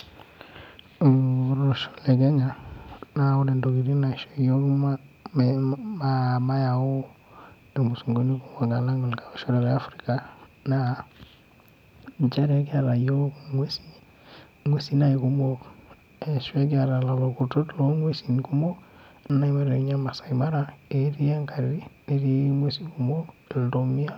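Compressed frames skipped at 19.30 s: the decoder lost about a tenth of a second of speech, likely one frame, and the speech jumps ahead by that amount.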